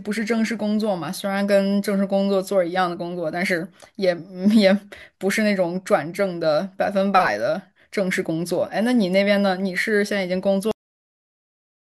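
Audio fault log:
10.71–11.86 s, cut-off end: the last buffers were never written or played, so the speech stops mid-sound and falls straight into digital silence with no decay.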